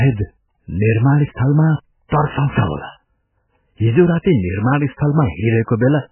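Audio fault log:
throughout MP3 compression: watery, swirling speech with nothing above 3 kHz, likely a starved MP3 encoder dropping the treble and toggling weak bands, which fits roughly 8 kbps.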